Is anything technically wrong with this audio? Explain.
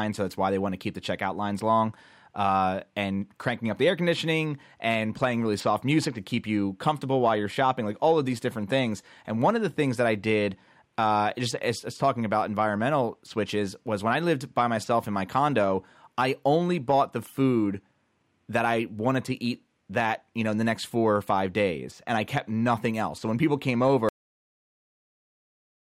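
Yes. At 24.09 s the speech stops mid-sound and drops straight into digital silence with no decay: a cut-off end, where the final buffers were never written or played.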